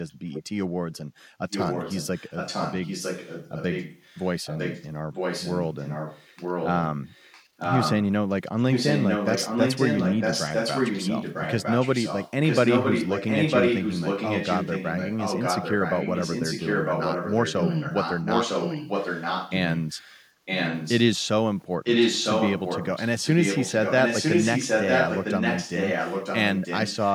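From 0.09 to 0.31 s the background is gated by the echo canceller: while the far-end loudspeaker plays, the canceller pulls the microphone down, so the room sound dips by up to about 13 dB for roughly a fifth of a second and then recovers once the canceller releases.

Echo leak follows across most of the clip, in seven stretches: 0.32 to 0.43 s, 1.5 to 4.86 s, 5.13 to 6.78 s, 7.05 to 8.05 s, 8.57 to 19.57 s, 19.77 to 21.03 s and 21.84 to 27.13 s. A copy of the speech returns 954 ms late. It starts around 10 dB below the speech, sits about 5 dB under it at 1.5 s, 5.13 s and 19.77 s, and reaches roughly the same level at 7.05 s, 8.57 s and 21.84 s. The likely cause is a speakerphone's echo canceller letting part of the played-back signal through to its microphone and sending it back.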